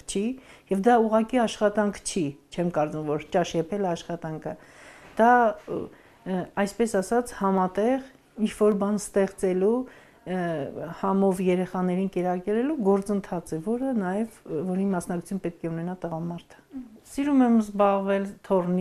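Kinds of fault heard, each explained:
Dropped samples: sharp single clicks at 7.58, 8.72 and 13.83 s, likely from a tiny sliver of the stream vanishing so the waveform jumps ahead.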